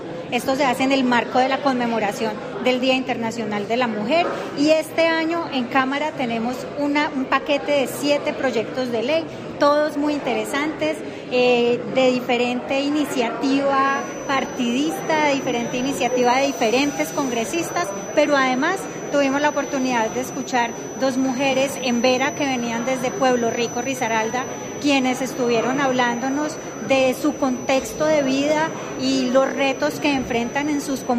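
At 13.78 s a feedback whistle sets in and continues to the end of the clip: a thin, steady tone at 6 kHz sitting roughly 20 dB under the sound and swelling and fading slowly in level. The likely cause is a loudspeaker-to-microphone loop held just at the edge of feedback, so that one frequency rings on without building up. On a spectrogram it shows as a single unbroken horizontal line at 6 kHz from 13.78 s onward.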